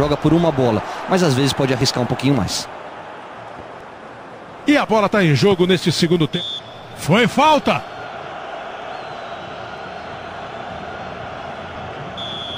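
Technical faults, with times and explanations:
1.81, 3.81, 5.80, 7.78, 9.78, 11.76 s: overlap between stream segments; every 2 s a segment boundary trims 6 to 18 ms of audio, causing a waveform jump heard as a tiny skip.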